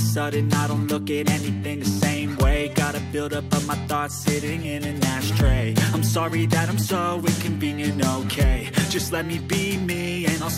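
No technical faults are audible.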